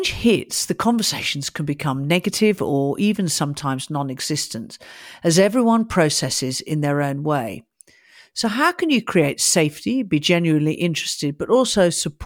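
Listening to the speech recording, nothing stood out as a technical problem at any point.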